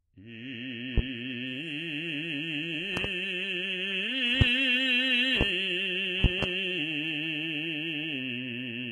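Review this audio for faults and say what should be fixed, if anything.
The music sounds gritty throughout, likely from HE-AAC compression. Nothing is heard above 12.1 kHz. The treble is rebuilt from copied lower bands, so cymbals turn metallic and grainy. The damage fits a very low rate, near 16 kbps. Encode at a higher bitrate.

Loud pops sit on top of the music at 0.98–1.01, 2.97–3.08, 4.41–4.44, 5.41–5.44 and 6.24–6.46 s. The second and last each hold two pops. Each peaks roughly 20 dB above the music. A sudden voltage step, likely from a connection or driver glitch, is added to the signal. Secure all connections and update audio drivers before recording.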